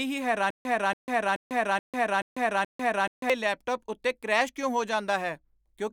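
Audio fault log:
0.50–3.30 s, stutter with silent gaps: the same 282 ms fragment of speech plays six times, each followed by about 147 ms of dead digital silence, so it repeats on an even 429 ms cycle until normal playback returns just before "ਲੈਪਟਾਪ ਉੱਤੇ ਕਰੈਸ਼ ਕਿਉਂ". The likely cause is a stalled stream replaying its last buffered fragment at each retry. Unlike a seamless loop or a single dropout, identical bursts alternate with true silence, and the speech that belonged in that span is missing.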